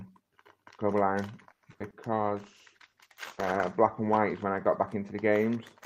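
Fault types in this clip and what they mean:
Repeated packet loss (robotic sound): Between about 1.51 and 1.94 s, the audio keeps dropping out in quick succession, with four separate holes. The receiver papers over most of them by stretching the last bit of sound, about 170 ms of fill in total, but around 60 ms simply goes missing. The longest hole is 110 ms. Roughly 40% of that stretch is patched, which is why it sounds choppy and a bit robotic.
Call bitrate drop: From about 2.17 to 4.68 s, the encoder gets squeezed onto far fewer bits because the call's bandwidth estimate sagged. The sound points to a fall from around 32 kbps down to about 13 kbps. With that little to work with, everything gets coded more coarsely, so the sound turns rougher and less clean. It sits at its worst for about 1.45 s before the bitrate climbs back.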